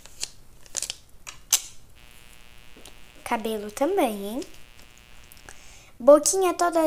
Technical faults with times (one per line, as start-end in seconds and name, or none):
1.94-5.78 mains buzz